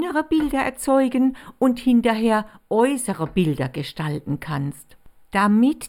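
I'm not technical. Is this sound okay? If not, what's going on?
No. The speech has a channel delay causing comb filtering throughout all of it. One side of the stereo signal arrives a tiny fraction of a millisecond late, which fits a delay of just a few samples. When the two sides mix together, some high pitches cancel out, starting around 7 kHz, so the speech sounds hollow and phasey in the upper range. Unlike plain muffling, the top isn't simply cut off. Instead, it has regularly spaced gaps.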